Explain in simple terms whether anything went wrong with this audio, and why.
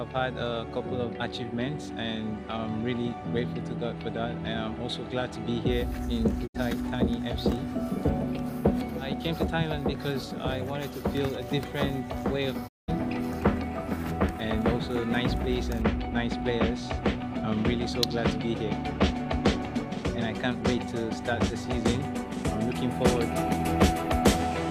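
The receiver twice lost the incoming digital signal, or got damaged data it had to reject, and went silent until clean data arrived again. This is a digital broadcast dropout. The sound quickly fades out over about 20 ms and cuts to silence, first from 6.46 to 6.56 s, then for longer from 12.67 to 12.90 s. About 64 ms and then about 192 ms of audio are lost, which fits two and then six missing frames.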